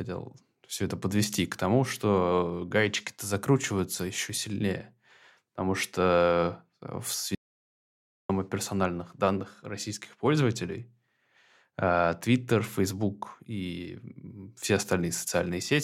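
At 7.35 s the speech cuts to total silence until 8.29 s, about 0.94 s lost. This audio dropout to silence likely came from a lost input. Sound returns at "о персональных".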